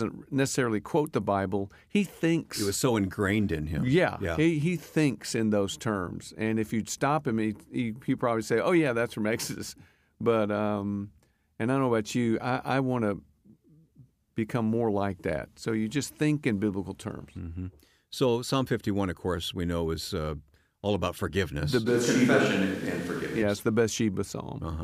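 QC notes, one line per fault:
21.88 to 23.40 s, switch to a distant microphone: the speech suddenly goes roomy and hollow, with the low end thinning out and background noise coming up to sit about 25 dB under the speech, while the overall level stays roughly the same. The close mic's signal has likely dropped out here, leaving a far-off mic picking up more room than mouth, and it snaps back just as abruptly at 23.40 s.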